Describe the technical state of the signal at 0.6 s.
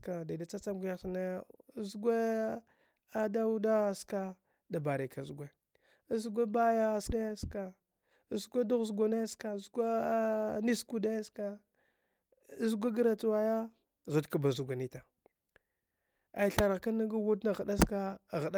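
At 0.6 s the speech signal is intact, with no audible fault at that moment.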